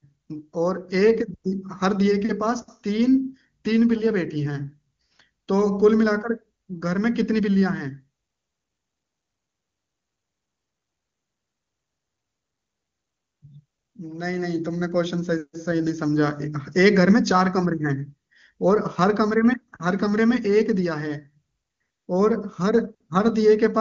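Nothing goes wrong at any point in this speech, which sounds just as you'd expect from the AMR wideband (HD Voice) codec running at its top rate of 23.85 kbit/s.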